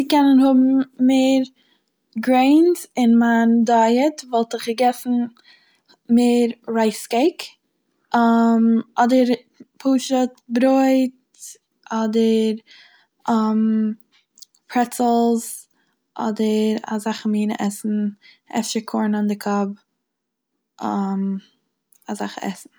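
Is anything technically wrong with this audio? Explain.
No, nothing technically wrong stands out here; it's a straightforward speech recording with no faults to point to.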